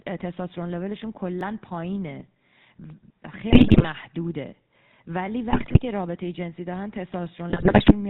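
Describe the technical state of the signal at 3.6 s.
At 3.6 s you're right in the middle of a burst of GSM bit errors running from about 3.50 to 3.85 s. Corrupted bits are reaching the decoder, so the filter, pitch and gain values it rebuilds each frame are garbage. The spectrum twists and the level jumps around from frame to frame, and the speech collapses into squawks, pops and a gargly mess. The density of the damage points to something like 5% of bits flipped.

Underneath that, the whole clip carries the GSM full-rate codec sound, and it's plainly audible here too. This codec rebuilds speech from a vocal-tract model driven by a sparse, evenly spaced pulse excitation, which fits the 13 kbps full-rate coder. That's where the buzzy, gravelly edge comes from. It also passes nothing above 4 kHz, so the top end is gone and everything sounds boxed in and rough.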